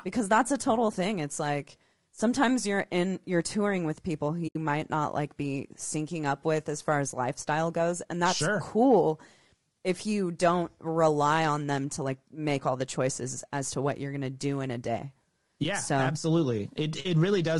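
A speech recording runs throughout with a rough, grainy texture that points to low-delay AAC compression, likely AAC-ELD at a low rate that fits roughly 32 kbps. The short transform frames resolve the voice's harmonics poorly, so noise fills the gaps between them and the top band sounds thin and synthetic. On a spectrogram the harmonic stripes look smeared, with speckled energy between them and a patchy, less detailed upper region. At 4.47 to 4.56 s, between "touring with people who" and "might not like be", there is AAC frame loss with muting: about 80 ms of audio drops to silence, which is consistent with four consecutive frames being zeroed by the decoder. Because the overlapping windows taper the sound out and back in, the gap has soft edges. The waveform shows a smooth fade to a flat line and a smooth return, and the spectrogram shows a clean, full-band vertical hole.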